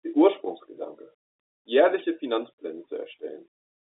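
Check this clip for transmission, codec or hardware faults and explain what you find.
Nothing faulty can be heard anywhere in this recording.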